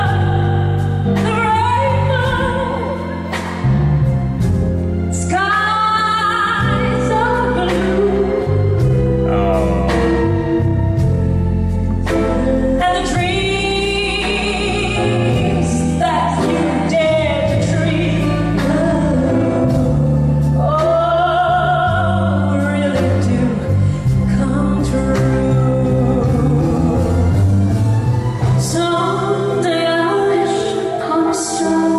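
Listening closely, nothing stood out as a technical problem at any point in the audio.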